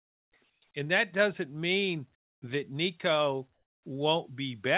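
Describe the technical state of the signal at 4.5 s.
At 4.5 s the speech is intact, with no dropout, click or distortion, only the narrowband call sound with nothing above 4 kHz and the light coding noise that fits a G.711 A-law link.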